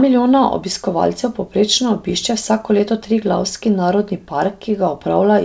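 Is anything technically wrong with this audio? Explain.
No, nothing in this speech clip points to a technical fault. It has come through a call codec, most likely G.722, so there is no content above about 8 kHz and the highs stop at that point.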